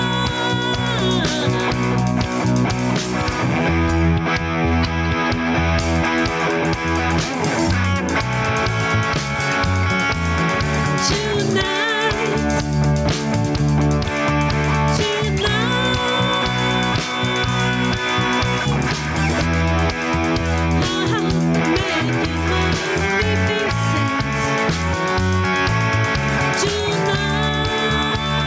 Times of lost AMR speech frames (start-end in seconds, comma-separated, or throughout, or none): none